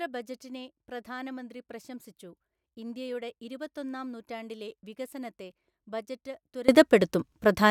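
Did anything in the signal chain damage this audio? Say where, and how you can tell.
Yes. A digital gain stage likely switched its setting in a single step with no ramp, applying a sudden gain jump of about 21 dB at 6.69 s, just after "ഇരുപത്തൊന്നാം നൂറ്റാണ്ടിലെ വികസനത്തെ ബജറ്റ്", and it holds to the end of the clip. The giveaway is that the speech and the background noise rise together at the same instant. A change in the talker's own loudness would leave the noise floor where it was, so the boost was applied to the whole signal.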